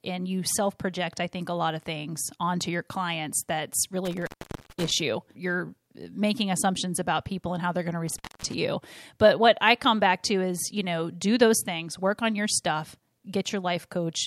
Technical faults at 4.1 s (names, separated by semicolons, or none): intermittent contact